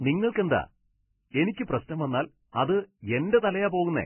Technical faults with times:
0.00-4.05 Vorbis compression
0.31-0.35 pre-echo
1.30-1.34 pre-echo
1.85-1.89 pre-echo
2.52-2.54 pre-echo

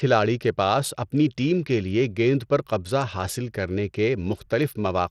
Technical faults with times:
0.00-5.11 Bluetooth SBC compression

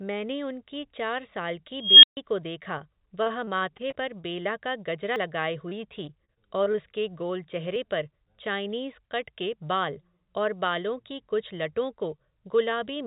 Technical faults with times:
1.75-2.17 unstable filter
2.78-4.47 repeated packet loss (robotic sound)
5.16 dropped buffer (overrun)
5.69-6.76 repeated packet loss (robotic sound)
7.76 dropped buffer (overrun)

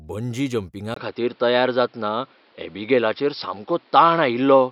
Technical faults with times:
0.94-4.72 input switched to a poorer device

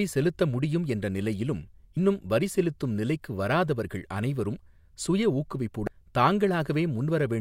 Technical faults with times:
1.97 damaged data in a compressed stream
5.87 damaged data in a compressed stream

